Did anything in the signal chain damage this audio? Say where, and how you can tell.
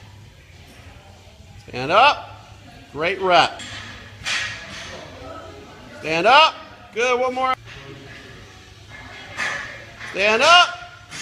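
No, nothing in the signal chain audibly damaged this audio.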